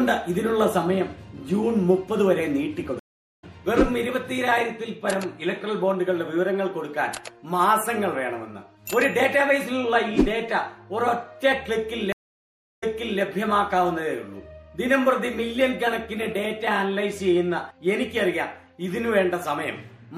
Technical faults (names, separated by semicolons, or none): MP3 compression; stream reconnect